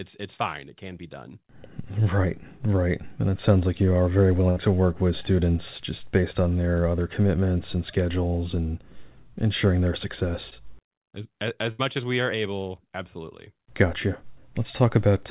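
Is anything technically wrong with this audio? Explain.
Yes. The speech has two bursts of packet loss and one short concealed packet loss, all heard through a narrowband call path whose sound stops at 4 kHz, which fits G.711 mu-law at 64 kbps.

From 4.50 to 4.58 s, and again from 11.71 to 11.81 s, the speech briefly freezes into a held, fading buzz or hiss before jumping ahead. These are bursts of packet loss. Several consecutive packets arrived too late or not at all. The receiver stretched the last sound it had, for about 62 ms and then about 74 ms, lowering it as it went. When real audio returned, roughly 60 ms and 80 ms of the original speech were simply gone.

At 10.50 to 10.53 s there is a quick smear, like a tiny wobble in the speech. This is short concealed packet loss. A small stretch of audio missed the decoder's deadline. The receiver synthesised about 12 ms from the preceding sound, continuing its pitch or its noise, then blended back in. 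About 20 ms of real speech was lost.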